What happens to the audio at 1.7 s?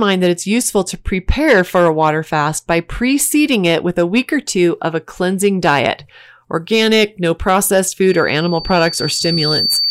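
Nothing goes wrong at 1.7 s; the audio is intact at that moment with no dropout, click, glitch or other audible fault.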